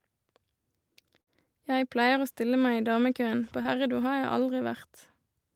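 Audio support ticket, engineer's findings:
Continued sound fading into a gap, 1.21 to 1.29 s: burst of packet loss in the network path. Receiver concealment extended the last sound for about 55 ms while fading it, then resumed with roughly 60 ms of the original audio skipped.

Brief smear with a small wobble, 3.63 to 3.67 s: short concealed packet loss upstream of the decoder. About 20 ms arrived too late. The decoder bridged it with roughly 18 ms of synthesized continuation, then crossfaded back into the real signal.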